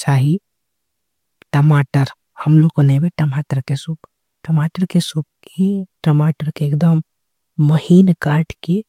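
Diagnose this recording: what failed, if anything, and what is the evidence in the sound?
Nothing failed; no stage shows any audible fault.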